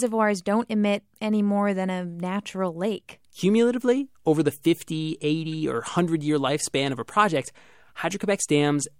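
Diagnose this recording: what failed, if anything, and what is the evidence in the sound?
The codec stage failed once. At 5.52 s a brief spell of misplaced energy appears in the speech, peaking around -30 dBFS. It lasts about one frame. This is a corrupt frame decoded: flipped bits misled the decoder, which played that frame with wrong gains or misread codes, scattering energy across wrong frequencies.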